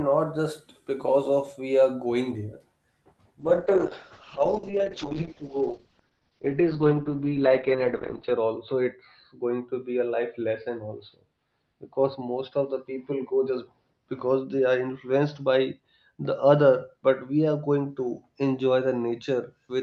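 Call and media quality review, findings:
Call bitrate drop, 3.43 s to end of clip. Audio turns coarse, with a watery coding texture. Top end collapses from 20 kHz to 6 kHz, muffled. Worst stretch lasts about 4.9 s. Component: Opus encoder on the WebRTC call path. The sound suggests the bandwidth estimate fell and the encoder rate was cut from around 32 kbps to roughly 7 kbps. Not recovered by clip end.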